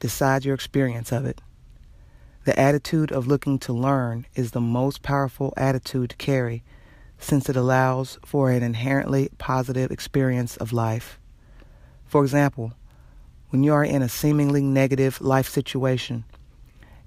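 There are no technical faults to describe in the audio.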